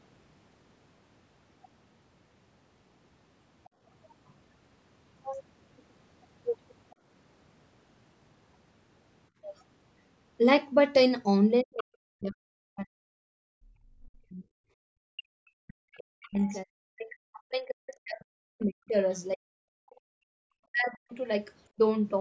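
At 3.69 to 3.81 s the room background is gated by the echo canceller: for about a tenth of a second the ambient sound drops by about 15 dB, then returns. A much deeper instance follows at 14.72 to 15.25 s, where the background falls away by about 40 dB for half a second. What separates this from double-talk suppression is that only the room tone vanishes, with no talker speech being clipped, because the canceller clamped the microphone while the loudspeaker was active.

The other side's voice leaks through four times: very faintly at 4.28 to 4.34 s, roughly 35 dB below the talker; at 9.43 to 9.64 s and 11.77 to 11.82 s, around 20 dB down; and at 15.94 to 16.61 s, around 25 dB down. Each is a short scrap of a second voice sitting under the main speech, likely residual loudspeaker echo that the canceller failed to subtract. Unlike the two suppression faults, this one adds sound rather than removing it.

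Speech is suppressed in double talk from 11.63 to 14.44 s and again from 15.53 to 21.17 s, around three and five seconds of affected audio. The talker's own speech dips, at worst by roughly 40 dB, likely because the canceller could not tell the near talker from the far-end echo and attenuated both. The brief leaks at 11.77 s and 15.94 s fall inside these stretches, marking where the far side was speaking. Content above 8 kHz is absent throughout, consistent with the call's microphone processing.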